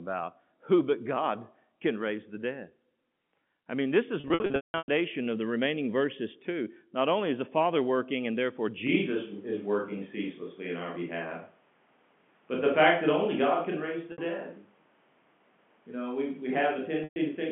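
From 4.2 to 4.88 s, between "I mean this" and "of the remaining verses", the speech turns buzzy and held, with brief fades toward silence. This is packet loss with pitch repetition: about 480 ms of audio went missing in scattered gaps, the longest 180 ms, and the receiver bridged each gap by repeating the last pitch period.

At 8.87 s, after "working and therefore", the voice abruptly turns roomy and hollow, with thinner bass and background noise roughly 35 dB below the speech, though the level stays about the same. This lasts to the end and is likely a switch to a distant microphone.

Two more short packet losses follow, at 14.12 s (60 ms) and 17.04 s (120 ms). All of this sits within the narrow 150 Hz to 3.4 kHz band of G.711 telephone coding.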